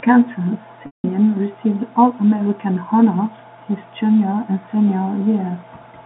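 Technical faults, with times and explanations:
0.86–1.04 s, packet loss with pitch repetition: the speech briefly turns into a held, buzzy tone that quickly dies away to silence, then the talker returns with a short cross-fade. About 180 ms of audio went missing, which fits nine 20 ms packets. The receiver filled the gap by repeating the last pitch period, fading it out over roughly 50 ms. Because the gap runs well past that, the rest falls silent, all within the narrow 200 Hz to 3.6 kHz telephone band of the G.711 line.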